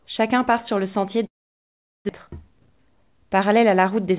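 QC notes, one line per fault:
1.26–2.11 s: long network dropout. Audio likely stopped arriving; the last sound trails off as fading noise, then about 0.76 s of silence before sound resumes.
2.27–4.19 s: jitter buffer speed-up. Sound plays about 9% fast at unchanged pitch, as short pitch-period pieces are cut to trim roughly 200 ms of built-up delay.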